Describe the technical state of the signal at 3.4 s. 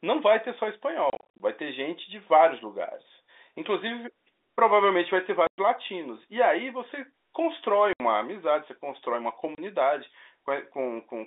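At 3.4 s the signal is intact, with no fault present, just the narrow telephone-band sound of the G.711 line carrying the speech.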